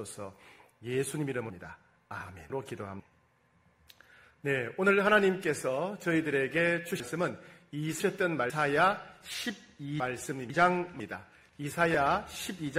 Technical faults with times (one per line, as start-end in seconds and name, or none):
1.50-3.00 chunks out of order
7.00-8.50 chunks out of order
10.00-11.00 chunks out of order